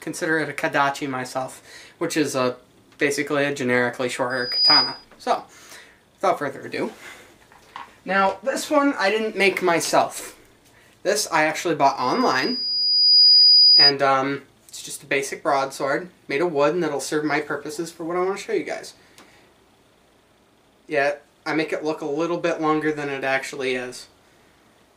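Loudspeaker feedback squeal at 4.30–5.05 s and again at 11.99–13.93 s: a 4.9 kHz tone swells over roughly 0.4 s, then about a second, reaching about 10 dB above the audio, as the microphone re-amplifies its own loudspeaker. A bit error spike at 12.83 s, within the second squeal, is one sharp broadband tick peaking near -25 dBFS, which points to a single corrupted sample.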